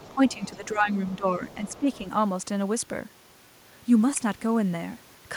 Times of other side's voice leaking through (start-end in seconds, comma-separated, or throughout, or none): 0.00-0.68, 1.12-1.16, 1.49-2.00